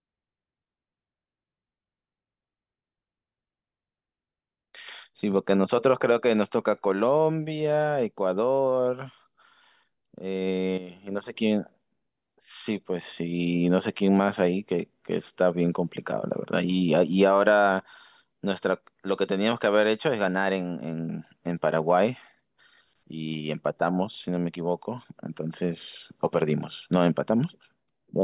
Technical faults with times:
none

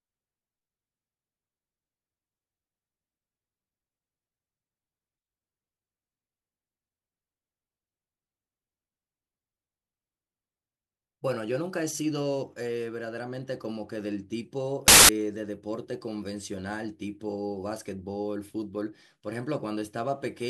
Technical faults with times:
14.88-15.09 samples built from the wrong bytes

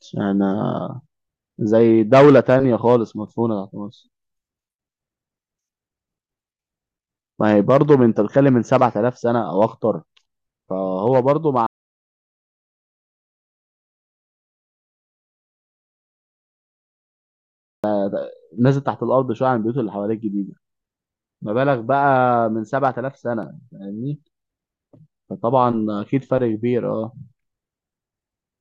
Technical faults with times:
11.66-17.84 audio dropout to silence

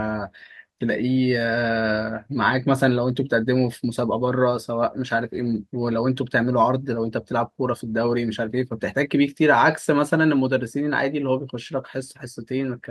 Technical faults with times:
none

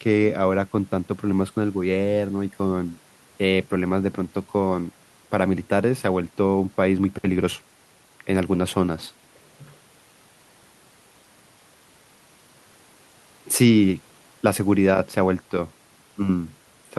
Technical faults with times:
none

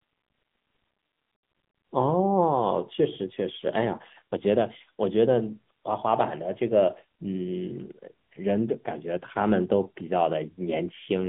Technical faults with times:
0.00-11.28 AMR narrowband mobile codec

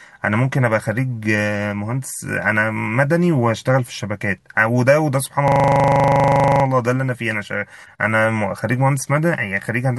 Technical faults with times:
5.48-6.64 system hang loop

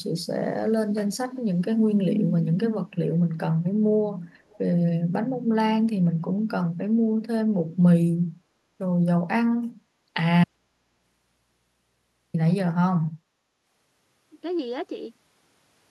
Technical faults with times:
4.49-4.58 echo leak
10.44-12.34 audio dropout to a faint residue

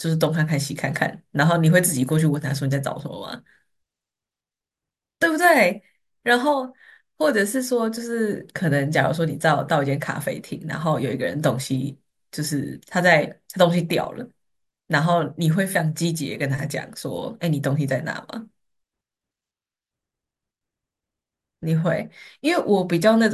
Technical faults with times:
none

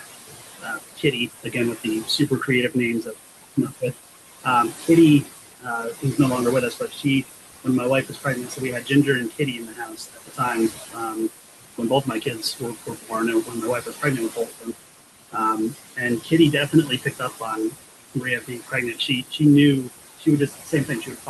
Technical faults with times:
0.00-21.30 noise suppressor artifacts
0.00-6.18 speech cut by the noise suppressor
6.71-14.76 speech cut by the noise suppressor
15.32-21.30 speech cut by the noise suppressor

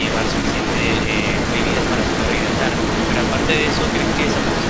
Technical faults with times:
0.00-4.69 echo leak

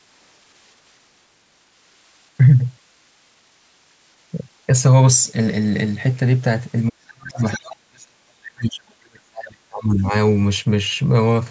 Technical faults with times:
6.88-10.13 speech suppressed in double talk
7.37-7.60 other side's voice leaking through

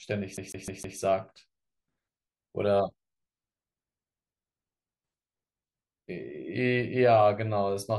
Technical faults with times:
0.37-0.98 CD stuck on one turn

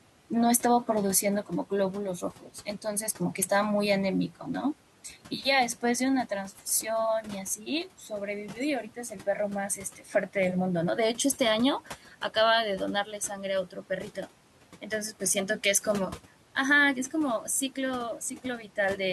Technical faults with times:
2.41-2.50 speech cut by the noise suppressor
9.96-10.14 speech cut by the noise suppressor
11.85-12.15 speech cut by the noise suppressor

